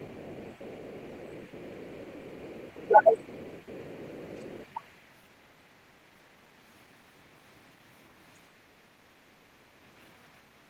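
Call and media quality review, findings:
Echo residual, 0.00–4.66 s: other side's voice leaking through, likely incomplete echo cancellation of loudspeaker pickup; faint far-end talk underneath, roughly 30 dB below the talker.

Speech suppressed in double talk, 2.88–2.93 s and 4.37–4.45 s: canceller likely attenuating both talkers during overlap; brief level dips, slight then deeper, near 10 dB.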